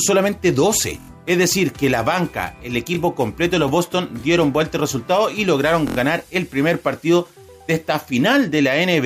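Three times, fresh audio failed to reach the output in time and the device replayed its last buffer instead, a repeated buffer fault. Each repeat lasts about 23 ms, which fits a 1024-sample buffer. From 1.00 to 1.09 s the same slice plays four extra times, giving a rapid buzzing stutter with hard joins. At 2.95 s a single repeat produces a brief click. From 5.88 to 5.97 s another fourfold repeat stutters again, with little or nothing missing afterward.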